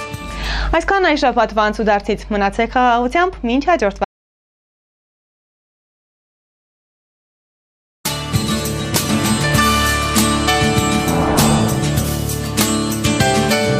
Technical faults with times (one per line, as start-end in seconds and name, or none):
4.05-8.05 audio dropout to silence